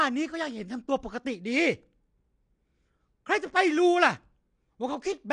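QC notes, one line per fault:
throughout, AAC compression. Nothing is heard above 9.8 kHz. The speech sounds dull and plainly smeared. The likely cause is low-bitrate AAC-LC, which fits about 32 kbps.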